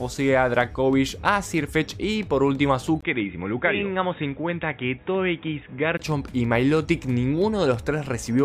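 At 3.01 s the sound drops out for a brief 20 ms gap, then comes back duller and boxier, with nothing above 3.8 kHz, a few dB quieter, and with a faint new noise floor sitting well below the signal. That lasts until 5.99 s, when the full band returns. The sudden change of bandwidth, tone and background points to the input likely having switched to a poorer device, such as another mic or a headset's call profile, and then switching back.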